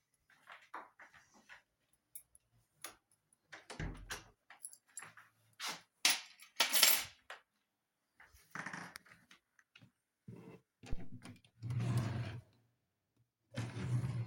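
At 10.93 s a deep thump enters the audio and is gone by 11.26 s. This is a phantom power thump. A supply on the input was switched while the channel was live. That sudden voltage step passed through the coupling capacitors and reached the signal path. It sounds like a dull, low knock under the sound. It peaks at about -27 dBFS. It dies away fast, with a decay of about 74 ms.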